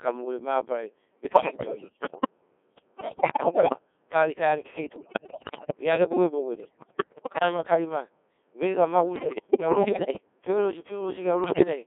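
Throughout, the speech sounds robotic and buzzy, confined to roughly 250 Hz to 3.5 kHz. This is the Codec 2 vocoder, heavily damaging here. It rebuilds speech from pitch, voicing, level and a spectral envelope rather than the waveform, which fits its 1.6 kbit/s mode.

Bursts of bleeps, warbles, sudden pitch and level jumps and garbled gibberish occur at 1.24–2.30 s, 2.96–3.78 s, 4.96–5.77 s, 6.60–7.43 s, 9.16–10.20 s and 11.44–11.67 s. These are bit errors on digital voice radio, with roughly one bit in ten to one in five flipped, so each frame's pitch, level and tone colour are decoded wrongly.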